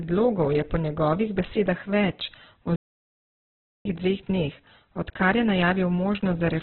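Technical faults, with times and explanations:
Throughout, Opus compression: the speech sounds muffled and boxed in, with nothing above about 4 kHz, and voiced sounds come across rough and grainy instead of clean. This is likely heavy Opus coding in its music (CELT) mode at a rate that fits roughly 8 kbps. With so few bits, the encoder narrows the band to telephone-like width and fills the remaining bands with folded or noise-like energy, which roughens tones without leaving obvious holes.
2.76 to 3.85 s, playback stall: the speech cuts out mid-flow into silence for about 1.09 s, then carries on. The silence is far longer than a natural pause, and the sound simply stops and later resumes. This likely comes from the player running short of data, or from its audio thread being blocked, so the output had nothing to play until the stream recovered and delivery started again.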